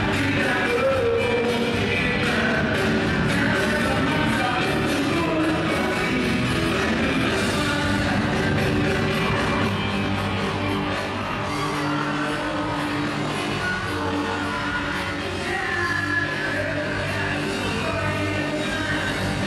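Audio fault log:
9.69–19.47 s, channel delay (comb filtering): one channel runs roughly 20 ms behind the other and the two are summed to mono, so shared content cancels at evenly spaced frequencies from about 30 Hz upward, giving a rough, slightly doubled sound with fixed spectral notches.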